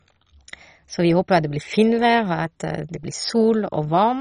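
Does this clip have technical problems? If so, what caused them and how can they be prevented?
Yes. Throughout the speech the sound is dull and carries a gurgling, granular distortion, with nothing present above about 10.1 kHz and upper bands flickering in and out. This is likely MP2 compression at a very low rate, which fits a bitrate around 32 kbps. MPEG Layer II divides the signal into 32 sub-bands and shares out a fixed bit budget. At this rate the top bands get no bits at all, and the remaining ones are quantised so coarsely that the detail turns rough. To prevent it, encode at a much higher bitrate or use a more efficient codec for low-rate delivery.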